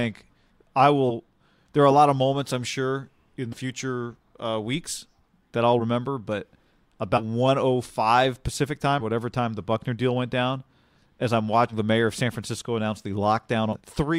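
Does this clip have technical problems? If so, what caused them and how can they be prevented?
Yes: compressed frames skipped at 1.09, 3.52, 5.79, 7.17, 9.00, 11.69 and 13.72 s. The speech jumps forward by roughly 40 to 100 ms, which points to several whole 10 ms frames lost. Protecting the file and stream against corruption and loss, with checksums and retransmission, prevents this.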